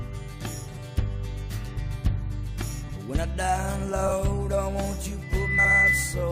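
A garbled flutter marks frames out of order at 0.67–0.77 s, 2.83–2.97 s and 4.07–4.11 s. Two adjacent blocks played swapped, with no time lost.

From 5.22 s a steady 2 kHz tone swells over roughly 0.4 s into a squeal about 10 dB above the sound, holding to 6.31 s. This is loudspeaker feedback squeal, where the mic-to-speaker loop gain exceeds one at that frequency.

Under it, 5.58–5.71 s brings another swapped-block flutter.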